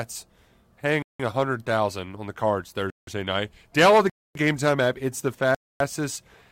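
The speech drops into a block of digital silence four times: 1.02 to 1.20 s and 2.90 to 3.07 s (each about 170 ms, which fits an 8192-sample buffer), then 4.10 to 4.35 s and 5.55 to 5.80 s (256 ms each). Whatever was feeding the output didn't fill those buffers in time, so zeros went out instead. The cut in and out is instant, no fade, so you hear a short hole.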